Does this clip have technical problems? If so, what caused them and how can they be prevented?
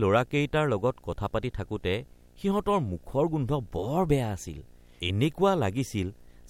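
Yes, there's video or display buzz under the speech for the whole clip: a 60 Hz buzz with hash above it, sitting about 35 dB below the speech, from a screen or video cable coupling into the audio. Keep audio cables away from monitors and video lines.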